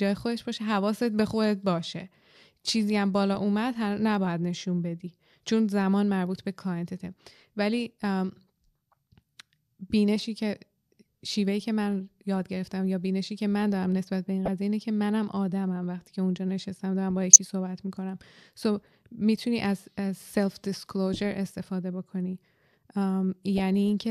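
Three short bursts in this speech clip are corrupt frames decoded: flipped bits in the compressed stream led the decoder to play a few damaged frames with wrong gains and codes, putting energy where it doesn't belong. They sound as chirps or blips at 14.45–14.48 s (peaking around -15 dBFS), 17.33–17.36 s (the loudest, near full scale), and 23.58 s (around -20 dBFS). On a spectrogram each appears as a brief broadband or misplaced smear.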